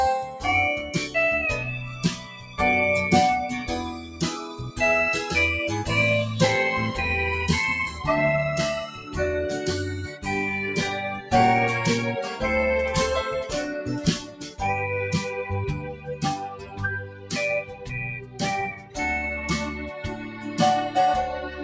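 The audio pumps and thins throughout, its level swinging by around 10 dB as held tones and tails sink while attacks survive: a speech noise suppressor applied to music or sounds. Steady passages sound cut by the noise suppressor, dipping by up to about 12 dB at 1.78–2.59, 3.93–4.79, 8.87–9.15, 10.06–10.26, 11.16–11.32, 14.19–14.61, 15.78–18.97 (deepest here) and 20.15–20.45 s, because it treats them as noise.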